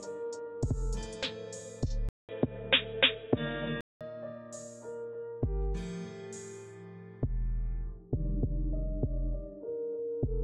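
At 2.09 s the sound drops out for about 200 ms, then comes back dull and boxy, with nothing above 3.8 kHz, a level shift of around 5 dB and a faint new noise floor sitting well under the signal. It stays that way until 4.01 s, when the full band returns. That pattern points to the input likely switching to a poorer device, probably another mic or a headset's call profile, and then switching back.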